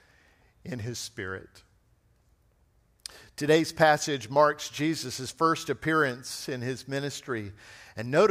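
Speech recording with no audible technical faults.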